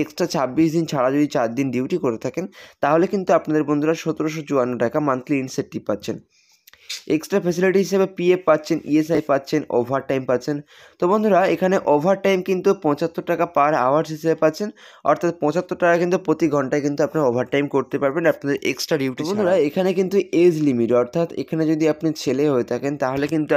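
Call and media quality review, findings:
Chunks out of order, 9.15 to 9.18 s. Brief jumbled blip. One 10 ms chunk plays two chunks late, after the ones meant to follow it. Nothing missing, but three hard joins. Points to a jitter buffer or write queue reordering.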